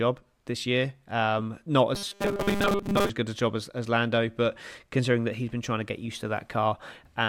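Speech clip with robotic sound from repeated short buffers between 1.95 and 3.09 s, just before "good a job as". The voice becomes a rigid metallic buzz at 200 Hz. Most of the audio there is repeated. The likely cause is late audio filled by looping a roughly 5 ms buffer.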